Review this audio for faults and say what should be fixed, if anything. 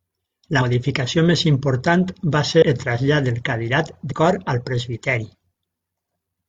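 Compressed frames are skipped at 0.58 s, 2.58 s (after "més important va") and 4.08 s (before "cor al"). The speech jumps ahead by two or three 42.7 ms frames, roughly 100 to 150 ms lost. Protect the file in storage and transfer, or re-encode it from the source, so no frames go missing or get rejected as damaged.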